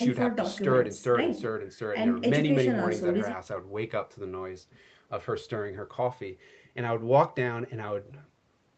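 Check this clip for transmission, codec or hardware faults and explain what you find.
No faults are audible.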